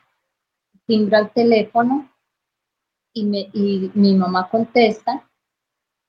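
Nothing technically wrong can be heard in this audio. No dropouts, distortion or other faults turn up at any point.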